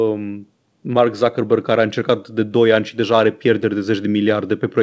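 No technical faults can be heard anywhere in this speech.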